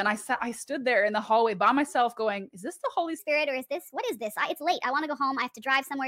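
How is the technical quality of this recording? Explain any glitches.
The recording has one clear glitch, a section at the wrong speed. From 3.19 s to the end, the audio runs 1.27 times too fast. Speed and pitch jump together, about four semitones higher. This is likely playback against the wrong clock. The sound turns hurried and bright.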